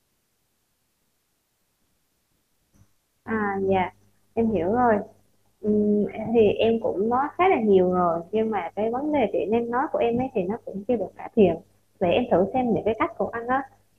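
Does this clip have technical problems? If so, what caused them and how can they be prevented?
No, this speech recording has no audible technical faults, so nothing here needs correcting or preventing.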